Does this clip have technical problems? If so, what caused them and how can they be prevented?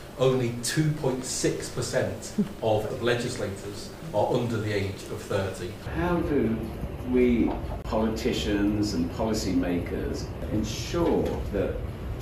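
Yes. At 10.27 s the sound skips forward by a few milliseconds, likely a dropped buffer (overrun): the software read the samples too late, the hardware overwrote them, and the two sides were spliced with no gap. On a waveform this shows as a sudden step where the cycles don't line up; on a spectrogram it is an abrupt seam. Preventing it means giving the capture thread higher priority or using larger buffers so reads keep pace.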